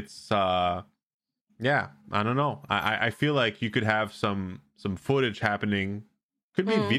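No technical faults can be heard anywhere in the recording. Nothing in the speech points to a problem in how it was captured or carried.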